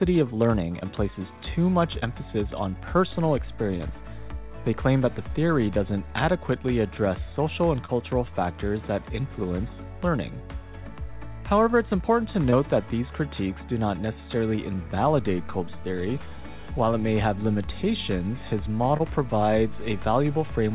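Five times in this call recording a packet carrying about 20 ms of audio failed to reach the decoder in time, and the receiver covered each gap by extending the preceding sound and then crossfading back. This short concealed packet loss comes through as a brief smear or wobble at 0.80–0.83, 1.99–2.03, 7.85–7.90, 14.56–14.59 and 18.97–19.01 s. The call path's narrowband sound, with nothing above 4 kHz, fits G.711 mu-law.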